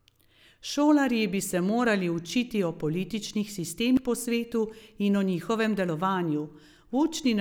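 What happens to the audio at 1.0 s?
Nothing goes wrong at 1.0 s; the speech plays through that moment intact, with no dropout, click, glitch or other fault.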